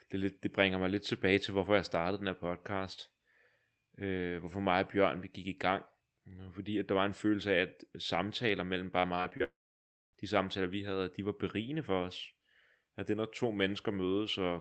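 Right after "af at samtaler mellem", from 8.99 to 9.42 s, the speech breaks up with repeated packet loss, giving a robotic sound. Five short gaps, the longest 40 ms, are each patched by stretching the preceding sound, so roughly 29% of that stretch is synthetic fill. Real audio between the patches is brief, so the result is choppy and robotic, with small pieces of speech missing.

Almost immediately after, from 9.44 to 10.15 s, the audio cuts out for about 0.7 s, most likely a long network dropout. The last sound is briefly carried on as a fading buzz, then gives way to about 0.61 s of silence. Speech returns with "de samtaler vi havde", and what was said during the gap is simply gone rather than delayed. The band-limited, coded tone around these faults fits an Opus call path at 24 kbps with an 8 kHz bandwidth.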